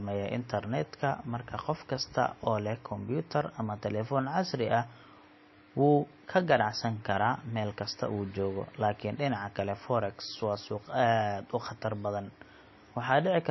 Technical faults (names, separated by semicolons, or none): MP3 compression